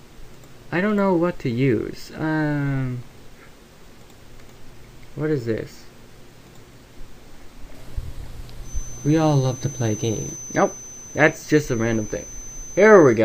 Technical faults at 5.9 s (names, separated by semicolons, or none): none